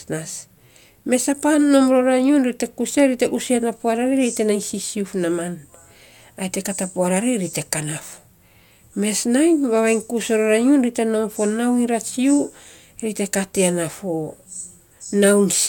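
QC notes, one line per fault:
Nothing stood out on listening to this speech clip.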